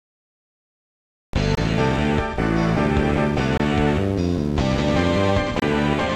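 Three short, hard-edged holes cut into the sound at 1.55–1.57 s, 3.57–3.60 s and 5.60–5.62 s, each about 23 ms long and 2.0 s apart. This is a gap between chunks: the audio was handled in 2-second pieces, with silence inserted at each join.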